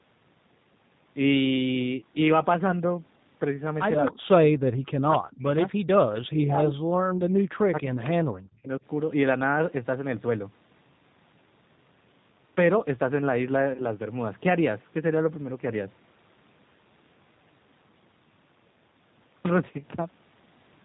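A speech recording passed through the G.729 codec at 8 kbit/s, which codes each short frame as a vocal-tract filter, a pitch predictor and a handful of excitation pulses, and keeps nothing above 4 kHz. The damage is plainly audible: the voice sounds band-limited, slightly rough and synthetic. Beneath that, the call's microphone path only took out the lowest bass. The network also dropped audio twice, and the decoder covered each gap with VoIP packet loss concealment by extrapolating its last pitch and filter at falling gain. At 8.60 to 8.65 s about 40 ms went missing, which fits two lost packets, and the voice smears into a fading buzzy tone or coloured noise. At 13.74 to 13.84 s a 20 ms gap, fitting one packet, is patched the same way. Because each frame builds on the previous one, the voice stays weak or distorted for tens of milliseconds after that gap.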